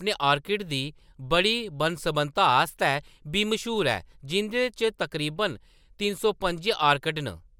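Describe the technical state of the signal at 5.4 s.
At 5.4 s the speech signal is intact, with no audible fault at that moment.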